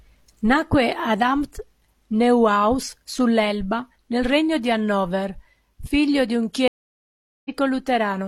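At 6.68 s the speech drops into about 0.77 s of silence, then resumes at 7.50 s roughly a tenth of a second further on. This is a stream reconnect: the connection broke, the player reconnected, and a fresh decoder picked up mid-stream, skipping ahead.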